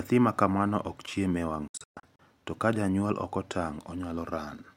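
A speech clip with a digital broadcast dropout between 1.68 and 2.19 s. The receiver stopped getting valid frames and muted until clean ones resumed, so the sound fades out within about 3 ms into several short silent holes scattered over roughly half a second. About 288 ms of programme is missing in total, the longest hole lasting 128 ms, which fits around nine lost frames of 32 ms. The missing material cannot be recovered.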